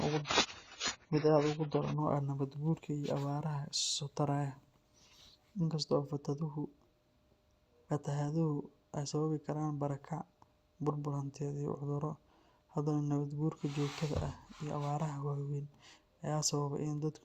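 For the first 2.0 s the speech sounds dull and smeary, with nothing above 7 kHz. Then it brightens abruptly without a gap: an adaptive stream starting at a low bitrate, fitting roughly 16 kbit/s stepping up to 96 kbit/s.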